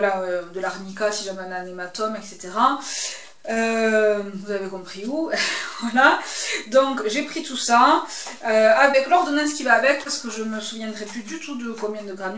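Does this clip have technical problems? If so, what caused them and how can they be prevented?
Yes. There are three short concealed packet losses, at 3.54–3.58 s, 8.92–8.95 s and 10.03–10.07 s. Each time, 20 ms of audio failed to reach the decoder in time. The receiver covered the hole by carrying the preceding sound forward and then blending back into the real signal, which leaves a brief smear or wobble at each point. This happens within a call codec path that has nothing above 8 kHz, which fits G.722 at 64 kbps. A more stable network connection, or a slightly deeper jitter buffer, would let these packets arrive before playback needs them.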